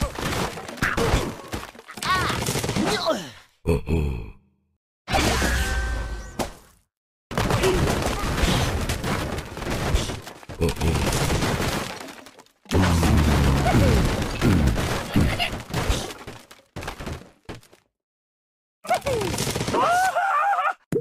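No technical faults can be heard anywhere in the audio. Nothing in the sound stands out as a problem worth describing.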